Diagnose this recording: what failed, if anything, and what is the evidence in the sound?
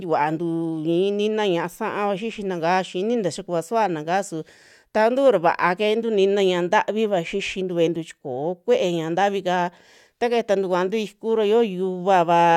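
Nothing in the signal chain has failed: the speech arrives intact and continuous at a steady level, with no stage from the wiring through to playback leaving any audible mark of malfunction.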